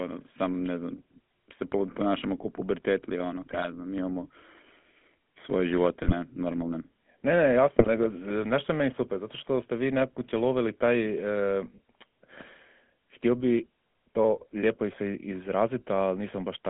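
Speech that sounds buzzy and gravelly throughout, with nothing above about 3.4 kHz and little below 200 Hz. This is the GSM full-rate codec, which rebuilds the voice from a vocal-tract model driven by coarse, regularly spaced pulses, as at 13 kbps. Three brief bursts of squawking, popping and gargling also break through, at 3.52 to 3.66 s (between "kao pubertetli ono" and "ja znam imamo"), 6.02 to 6.13 s, and 7.79 to 7.89 s (just before "e nešto je meni"). These are GSM bit errors: corrupted filter, pitch or gain values distort the spectrum and level over what sounds like a handful of frames each time.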